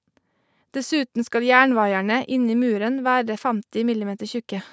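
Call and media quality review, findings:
Nothing to flag on this speech clip; it has the usual call microphone processing, with the lowest bass trimmed and nothing above 8 kHz, and that's just the normal path doing its job.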